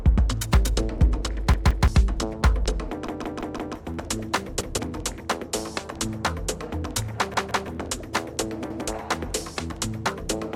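Repeated buffers stutter at 1.54, 3.07, 4.61, 7.34 and 8.70 s. New audio arrived late, so a 171 ms block, which fits an 8192-sample buffer, replayed one to four extra times, most at 3.07 s. The waveform and spectrogram show identical tiled segments with hard vertical seams.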